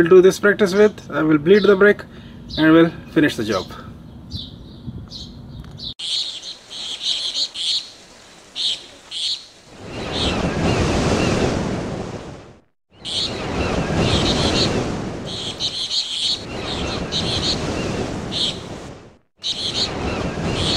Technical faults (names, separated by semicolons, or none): none